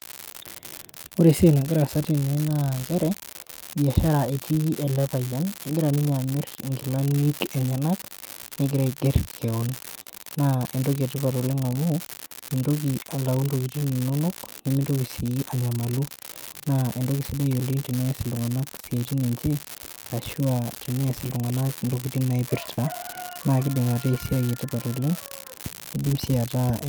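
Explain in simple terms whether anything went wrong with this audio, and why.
Several things went wrong. There is an unreliable data bit. One signal line flips at random, causing a steady crackle that continues even in pauses.

There is also clock drift between sender and receiver. The sender's clock runs roughly 2% slow, so the receiver keeps running short of sound to play.

To cope, it makes repeated timing corrections from 3.21 to 26.32 s. It repeats tiny pieces, adding about a fifth of a second overall.

Finally, there are scattered short gaps. About ten occur between 0.61 and 10.07 s, about four between 13.80 and 16.19 s, and about ten between 18.02 and 26.05 s. Each is a few hundredths of a second, patched by stretching the last sound into a brief tick or smear.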